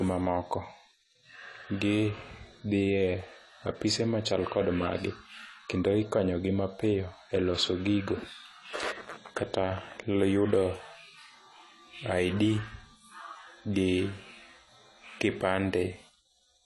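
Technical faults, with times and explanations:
Throughout, AAC compression: the speech sounds dull and smeared, with nothing above about 11.5 kHz and a fizzy, warbling edge on sibilants. That's likely a low-bitrate AAC-LC encode, somewhere around 32 kbps, where the encoder drops the top band and starves the rest of bits.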